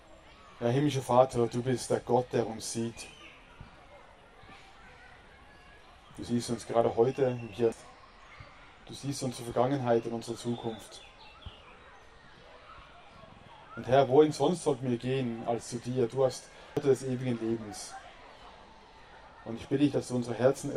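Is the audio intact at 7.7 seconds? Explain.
No. At 7.72 s there is damaged data in the compressed stream. Corrupt frames make the decoder misread them and lose sync until it finds the next valid frame header, giving a brief chirp or blip. A spectrogram shows a thin broadband smear, and the waveform shows an abrupt discontinuity.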